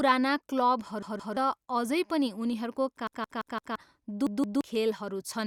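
Repeated buffer stutters occur at 1.02 to 1.37 s, 3.07 to 3.76 s, and 4.27 to 4.61 s. New audio arrived late. The device replayed the same 171 ms block, which fits an 8192-sample buffer. It played two extra times, then four, then two. Each repeat has a hard join. The speech stutters, and roughly 0.3 s, 0.7 s and 0.3 s of it is lost.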